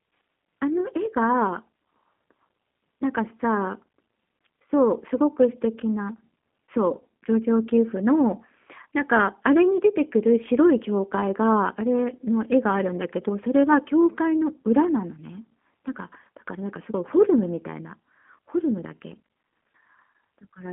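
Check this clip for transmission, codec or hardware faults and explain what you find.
One codec fault affects the entire recording. G.729 codec, throughout: speech is rebuilt from a vocal tract filter and sparse pulses, leaving a rough, synthetic band of 200 Hz to 3.5 kHz.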